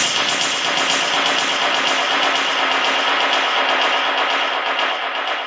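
Gain pumping runs through the whole clip. The gain swings by around 20 dB. Loud and soft parts sit squashed together. The likely cause is gain set far too high, with a fast limiter clamping down. Nothing comes through above 8 kHz.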